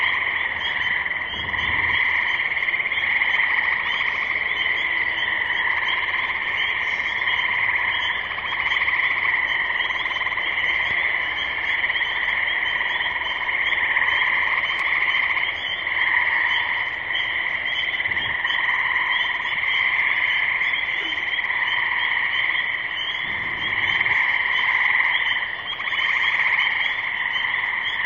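No technical faults are audible anywhere in this audio.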